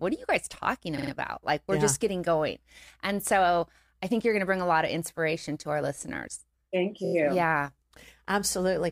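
At 0.97 s, just after "are you guys talking", the speech stutters on repeated frames. A block of about 46 ms, which fits two compressed frames, plays three extra times. The audio picks up with "about like we're yeah" at 1.11 s, about 0.14 s late. At 7.04 s, after "to our listeners thank", a 23 ms block loops four more times, a stutter adding about 0.09 s before "you yeah" at 7.13 s.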